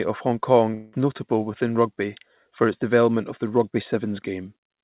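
Speech comes through a narrowband call path whose coding points to G.711 mu-law at 64 kbps, leaving nothing above 4 kHz. Between 0.74 and 0.96 s the audio likely suffered a long network dropout. Packets stopped arriving, and the receiver stretched the last sound into a fading buzz for about 190 ms instead of going silent. When audio resumes on "notable within rugby for", roughly 180 ms of speech is simply missing.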